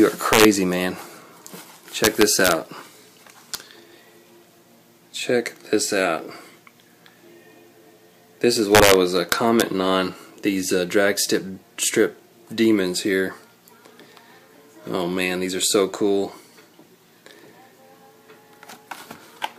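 Integer overflow cracks through the audio at 0.33–0.45 s, 2.04–2.52 s, 3.55 s, 8.75–8.94 s and 9.32–9.62 s. Peaks pushed past the largest representable sample value, by about 2 dB, 4 dB, barely at all, 4 dB and 2 dB respectively, wrapped around to the opposite extreme instead of being held at the limit. Each wrapped peak flips across the full range, so these loud passages break into violent, jagged cracks far harsher than ordinary clipping.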